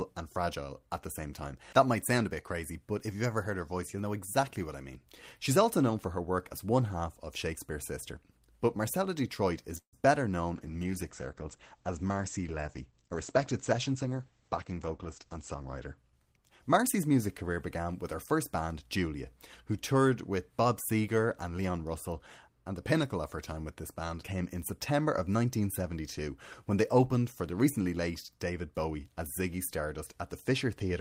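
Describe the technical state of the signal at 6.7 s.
At 6.7 s the audio is intact, with no fault present at that moment.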